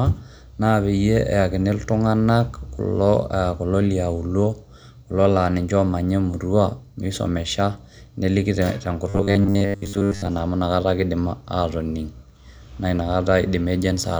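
From 9.09 s to 10.27 s, just after "emurua misomesha neliki te" and before "amu inakata ake idim", the speech turns into robotic sound from repeated short buffers. The voice becomes a flat metallic buzz at 100 Hz. It still loosely tracks the speech. The likely cause is audio arriving too slowly, with the same 10 ms chunk replayed to fill the gap. That repetition sets the fixed pitch. Roughly seven tenths of the span is filler, so real audio is skipped.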